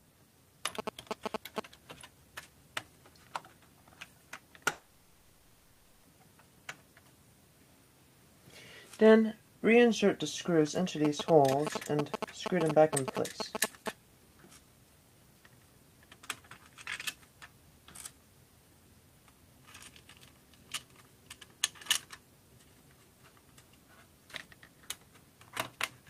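From 0.79 to 1.60 s, GSM signalling bursts break in: a galloping dit-dit-dit of short buzzes at 217 Hz, roughly as loud as the sound itself. A phone nearby is sending brief radio bursts that the audio circuit rectifies. The grouped, stuttering rhythm sets it apart from steady mains hum.

From 4.71 to 6.05 s, the sound gives way to a smeared continuation of what came just before for about 1.3 s, then resumes further on with that stretch gone. A long network dropout is the likely cause, with the receiver filling the whole gap. Its length and the missing material set it apart from a brief packet-loss glitch.

The same GSM bursts return from 11.05 to 13.89 s, with the same 217 Hz buzzing gallop at a similar level.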